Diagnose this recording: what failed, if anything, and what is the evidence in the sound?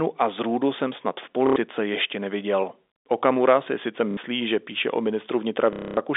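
Network packet loss with last packet repeated: the receiver looped stale audio into the gaps, causing robotic stutters at 1.47–1.56, 4.11–4.17 and 5.73–5.97 s.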